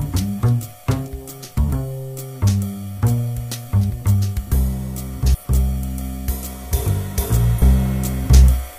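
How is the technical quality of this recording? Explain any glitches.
Technical quality is undermined by four brief glitches from damaged data in a compressed stream, at 1.03–1.09 s, 3.86–3.91 s, 5.30–5.36 s and 7.57–7.62 s. In each, corrupted bytes make the decoder misread the frames and lose sync until it finds the next frame header, producing a short chirp or blip of roughly 50–60 ms.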